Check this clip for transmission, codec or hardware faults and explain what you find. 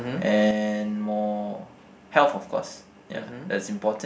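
One fault is present: one channel drops out from 0.51 s to the end. The speech falls abruptly by about 6 dB and stays there, likely because one stereo side was lost before the mono sum halved the shared content. On a waveform the envelope steps down at 0.51 s; a spectrogram darkens evenly across all frequencies.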